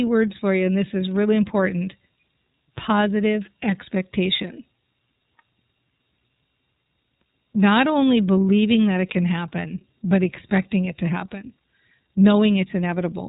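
Speech run through the iLBC codec from start to finish, consistent with its 30 ms frame mode near 13.3 kbps, with each frame's excitation coded independently. The result is a narrowband sound with nothing above 3.8 kHz and a plainly audible rough, synthetic edge.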